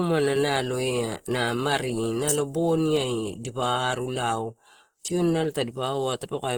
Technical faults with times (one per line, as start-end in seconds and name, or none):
0.00-6.58 Opus compression